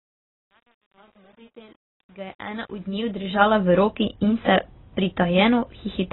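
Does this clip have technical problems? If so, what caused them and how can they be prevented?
Yes. The speech sounds dull and smeared for the whole clip, with nothing above 4 kHz and a warbly, fizzy texture on sibilants and held sounds. The likely cause is heavy AAC compression, AAC-LC at a very low rate, which fits about 16 kbps. The encoder discards high frequencies and coarsely quantises what remains. Simple low-pass filtering would only dull the sound, and this smearing and warble point to a codec instead. Encoding at 64 kbps or more, or using a speech codec such as Opus, would prevent it.

From 0 to 3.68 s the fade-in is gritty, worst from 0 to 2.96 s. This is truncation distortion on a fade. The gain stage rounds to few levels without dither, which fits about 9 bits, so the quiet start of the fade turns into coarse steps. Codec artefacts would persist at full level, but this grit clears as the fade rises, and the fault ends by 3.68 s. 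Processing fades at 24-bit or floating-point resolution and dithering on output would prevent it.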